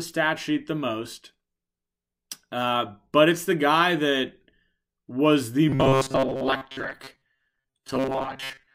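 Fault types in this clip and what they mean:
Robotic sound from repeated short buffers: after "was the", from 5.69 s to 8.75 s, most of the speech becomes a rigid metallic buzz at 134 Hz, likely from a roughly 7.5 ms buffer looping; spectrograms show evenly spaced harmonics, waveforms identical repeating cycles.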